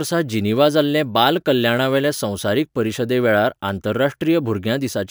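Crude rate conversion throughout: unfiltered sample repetition, consistent with a 32 kHz to 48 kHz step, adds gritty inharmonic fizz roughly 25 dB under the speech.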